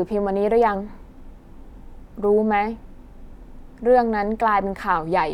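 No technical faults are audible anywhere in the speech.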